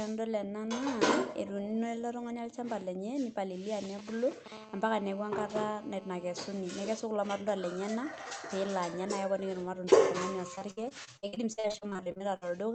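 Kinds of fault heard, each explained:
GSM signalling bursts: A nearby 2G phone's intermittent radio bursts, rectified by the audio circuitry, give a galloping dit-dit-dit of brief 217 Hz buzzes from 3.84 to 4.48 s, roughly 15 dB below the speech. A spectrogram shows clustered vertical strips with harmonic stripes; the waveform shows spiky grouped pulses.
GSM phone buzz: A nearby 2G phone now transmits continuously in call mode, pulsing 217 times a second, and the rectified pulses form a hard, raspy buzz from 4.52 to 6.45 s at about 19 dB below the speech. A spectrogram shows evenly spaced horizontal harmonics at multiples of 217 Hz; the waveform shows a regular pulse-like ripple.
Repeated packet loss (robotic sound): From 10.55 to 12.51 s, some twenty gaps of up to 60 ms each are patched by stretching the preceding sound, concealing about 31% of the span. The result is choppy, with pieces missing. 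A spectrogram shows smeared, repeated frames and breaks within a speech band that stops near 8 kHz; the waveform shows repeated cycles and holes.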